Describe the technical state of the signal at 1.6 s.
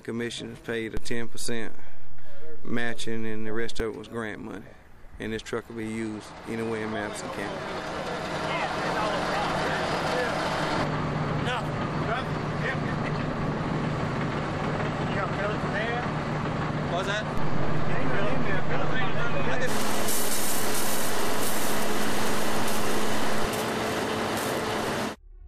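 At 1.6 s the signal sits inside a DC step that runs from 0.97 s to 3.8 s. The waveform's zero line has jumped to an offset of about -18 dBFS, as happens when a converter recalibrates or an input carrying its own offset is switched into the path. The sudden shift is heard as a low thump or click at 0.97 s, while the sound riding on top continues unaltered.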